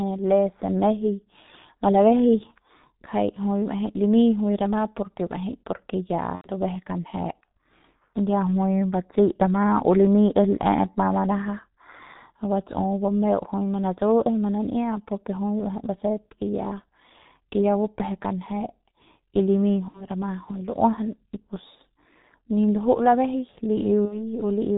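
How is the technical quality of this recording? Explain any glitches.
The technical quality is poor: the speech passes through a low-rate telephony codec the whole way, and three short dropouts break it further.

Throughout, the G.723.1 codec squeezes the speech to about 6.3 kbit/s, discarding everything above 4 kHz and tracking the voice only slowly. The result is heavily muffled, hoarse speech with smeared consonants.

At 6.35–6.50 s, 19.88–20.08 s and 24.05–24.24 s, VoIP packet loss is concealed by the speech codec: the decoder fills gaps of about 90 ms, then 60 ms twice, by extending its last pitch and filter while fading the level. Each gap turns into a fading buzz or coloured noise, and the speech stays weak briefly after it.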